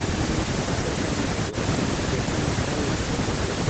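Nothing's technically wrong with this speech clip: it has simply gone through ordinary call processing, and with nothing above 8 kHz it has the trimmed top end you'd expect from an Opus call codec working at a modest bitrate.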